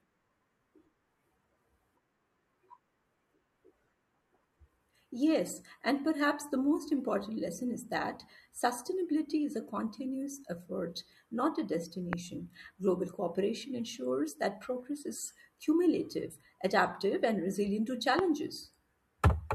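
Sharp loud pops punch through the speech at 12.13–12.15 s and 18.19–18.21 s, each around 20 dB above it, likely from a sudden voltage spike.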